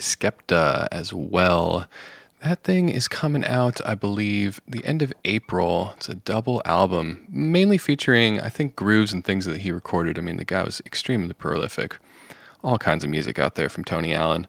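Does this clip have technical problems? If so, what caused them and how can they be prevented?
No, this clip has no technical problems, so there is nothing to trace to a cause or prevent.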